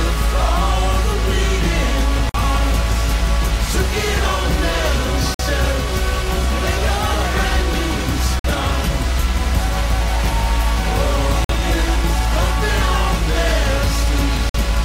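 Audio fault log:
2.29–2.34, 5.34–5.39, 8.39–8.44, 11.44–11.49 and 14.49–14.54 s, gap between chunks: the audio arrives in 3 s blocks, and a stretch of 50 ms of silence has been left at each join, likely from padding or a player that starts each new block late. Nothing is missing from the sound itself, but it is interrupted at each join, giving five short, evenly spaced holes that recur every 3 s or so.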